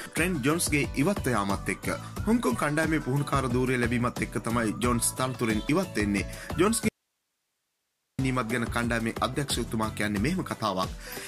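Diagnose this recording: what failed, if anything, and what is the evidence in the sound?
The signal feed likely broke upstream while the stages after it stayed live, causing an audio dropout to a faint residue. From 6.89 to 8.19 s, about 1.3 s, the sound cuts out abruptly, leaving only hiss roughly 50 dB below the signal, then snaps back.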